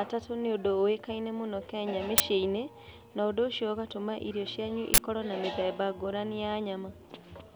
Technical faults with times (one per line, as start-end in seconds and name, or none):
2.18-2.20 uninitialised buffer
4.94-4.98 uninitialised buffer